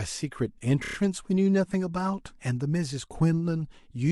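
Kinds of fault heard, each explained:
Repeated frames: from 0.83 to 0.95 s the speech stutters as one slice of about 29 ms, which fits a run of three compressed frames, plays four extra times, adding about 116 ms. On a waveform the same short shape repeats side by side. On a spectrogram an identical block of harmonics and formants recurs at 29 ms spacing.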